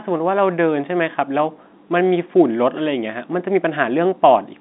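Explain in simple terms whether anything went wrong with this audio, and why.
Nothing went wrong with this audio: it is ordinary telephone-line speech, and there are no faults to hear.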